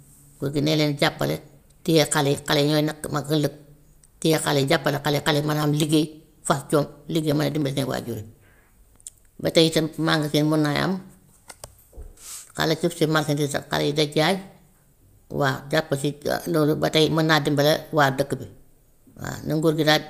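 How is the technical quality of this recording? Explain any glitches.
From 3.44 s to 7.72 s the speech carries a steady train of ticks, about ten per second, spaced 0.1 s apart. These are periodic USB or driver dropouts. Something blocks the USB bus or audio driver at a fixed rate, and each time roughly half a millisecond of audio is skipped outright and the waveform jumps ahead. Around forty such cuts make the regular clicking, which stands out only where speech is present.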